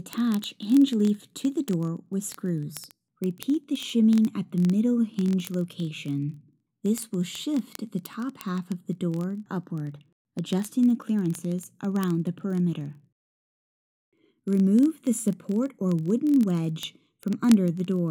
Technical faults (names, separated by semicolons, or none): word clock ticks